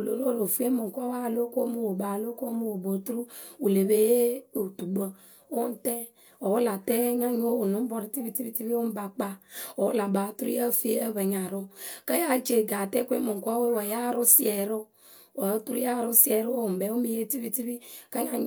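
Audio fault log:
Nothing to log here, as the speech comes through with no faults to report.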